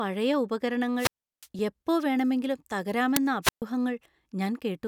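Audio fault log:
0.97–1.47 s and 3.42–3.62 s, wireless microphone squelch dropout: In each case a short swell of hiss comes in as the radio signal from the microphone weakens, then the receiver's squelch shuts the output off. That leaves a hole of near silence, about 356 ms in the first event and about 131 ms in the second, before the speech comes back. The hiss comes from the fading carrier, and the silence comes from the squelch deliberately muting it.
1.59 s, underrun with held sample: For about 0.67 ms the output ran dry and the converter held its last value, so the waveform flattens. The length points to a gap of about 32 samples at 48 kHz. Playback then carried on from where it had stopped, with essentially no audio lost, so the join is soft. It sounds like a soft tick rather than a sharp click.
3.16 s, uninitialised buffer: A block of about 5 ms was sent to the output before any audio had been written into it, so stale memory was played as if it were samples. 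Those leftover values bear no relation to the speech, so they come out as a loud crack. It cuts through sharply because its level has nothing to do with the surrounding signal.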